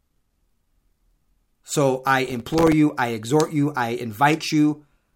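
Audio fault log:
2.26–2.72 s, processor overload crackle: many missed processing deadlines in a row leave tiny hard-edged silent gaps, fitting very short buffers, heard as gritty crackle over the speech.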